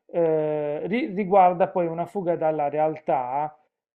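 A short stretch of recorded speech, with no technical fault to be heard anywhere in it. Nothing in the audio points to a problem with how it was captured, processed or delivered.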